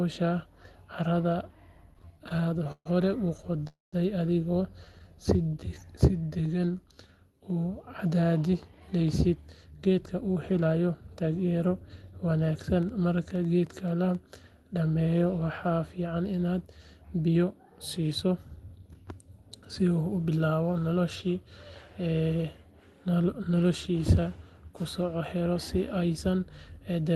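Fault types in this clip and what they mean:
Repeated stalls (stutter): From 1.91 to 5.02 s the speech drags and catches in 25 small gaps, the longest 136 ms, each filled by stretching the last sound. Packets arrived late or too slowly, so the jitter buffer kept emptying while nothing was lost.
Call audio freeze: Between 3.67 and 3.94 s the sound hangs for about 250 ms, a brief held buzz fading into 170 ms of silence, then resumes where it stopped. The likely cause is packets held up in transit, which emptied the jitter buffer and added delay.
Jitter buffer slow-down: From 4.85 to 7.14 s the speech plays at 85% speed with unchanged pitch, drawn out by about 356 ms. The receiver repeated single pitch periods and pause fragments to rebuild its reserve.
Jitter buffer speed-up: From 8.80 to 12.19 s the speech is hurried at 113% with pitch intact, losing roughly half a second, and shorter bursts at 110 to 114% occur near 19.4, 23.1 and 26.2 s. 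The buffer held excess audio and trimmed pitch-period slices.
Train of clicks: Between 12.83 and 14.16 s about seven similar ticks land at an uneven pace, roughly five per second, peaking about as loud as the speech. They are likely from electrical interference or a faulty connection or power supply injecting repeated pulses.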